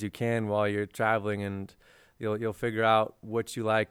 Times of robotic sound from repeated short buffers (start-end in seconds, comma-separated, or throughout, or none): none